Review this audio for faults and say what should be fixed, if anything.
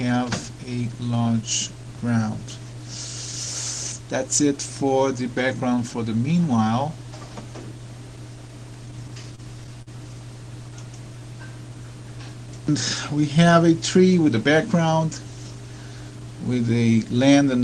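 Repeated stalls (stutter) run from 8.85 s to 9.89 s. The sound catches nine times in this stretch. Each catch is brief, the longest about 42 ms. Together they fill roughly 131 ms, about 13 percent of that second. Packets reached the receiver late or too slowly, so its jitter buffer kept draining. Each time, it stretched the last sound to cover the wait. Nothing is lost, but the audio drags and stutters. A deeper adaptive jitter buffer and a steadier network path would prevent it.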